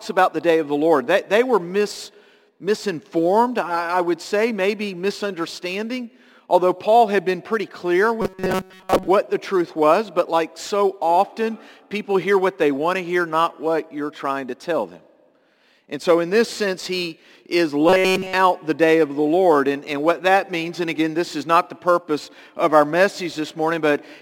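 The audio turns into robotic sound from repeated short buffers at 8.22–9.08 s (mostly) and 17.89–18.33 s (entirely): a metallic 188 Hz buzz, likely from a roughly 5 ms buffer looping, rather than gaps or stutter.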